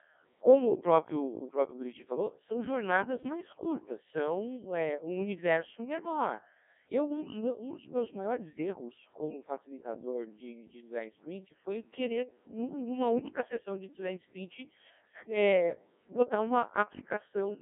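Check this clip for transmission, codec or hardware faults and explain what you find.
There's one fault, and it runs the whole way through: the speech has been through a Codec 2 vocoder. The decoder doesn't rebuild the original waveform. It resynthesises the voice from sine waves driven by pitch, voicing, energy and a rough spectral envelope, so everything sounds robotic and buzzy, and the damage here is heavy. The band sits around 200 Hz to 3.5 kHz with nothing above 3.6 kHz, and the coarseness fits the 1.6 kbit/s mode.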